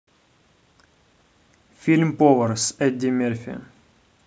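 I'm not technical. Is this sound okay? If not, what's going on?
Yes, nothing is wrong with this speech recording.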